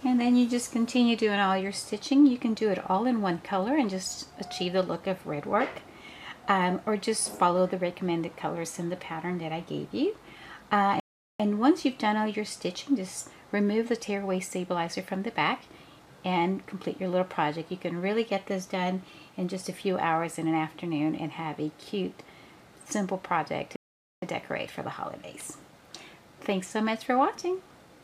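At 11.00 s and again at 23.76 s the output drops to silence for about 0.40 s and 0.46 s, playback stalls, likely from the player starving for data.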